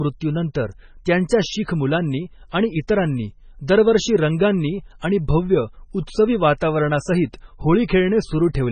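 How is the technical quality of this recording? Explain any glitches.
Quality is poor: heavy compression damage runs through the whole speech clip. Nothing is heard above 9 kHz, and the sound has a watery, swirling texture with chirpy, metallic s sounds and softened consonant attacks. This is likely MP3 compression at a very low bitrate, about what 16 kbps would give. Starved of bits, the encoder drops the treble and lets weak frequency lines flicker on and off between frames. That flicker is what separates it from a simple low-pass filter, which would only dull the sound.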